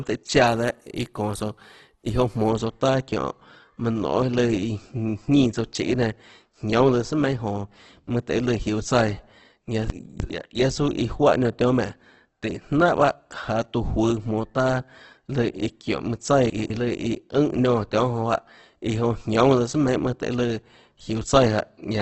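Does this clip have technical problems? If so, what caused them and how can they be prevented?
Yes. The speech is heavily damaged throughout, likely by Opus compression in its music (CELT) mode. Tones sound rough, grainy and noisy. Nothing is heard above 12.1 kHz. The damage suggests a bitrate near 12 kbps. Encoding at a higher bitrate, or letting Opus use its speech mode, would prevent this.

There are two chunks out of order. At 9.9 to 10.3 s, a 100 ms chunk plays late, which fits it arriving about three chunks behind. At 16.5 to 16.7 s, another arrives one chunk late. Each sounds like a jumbled moment. A jitter buffer that reorders chunks by sequence number before playback would prevent this.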